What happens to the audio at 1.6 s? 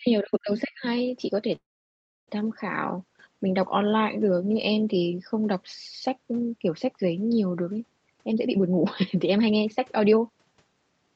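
From 1.55 to 2.30 s there is a call audio freeze. The last sound trails off in a short fading buzz or hiss, then 0.66 s of silence, likely from delayed packets emptying the jitter buffer. Unlike a dropout, nothing is lost: the audio resumes exactly where it stopped, only later.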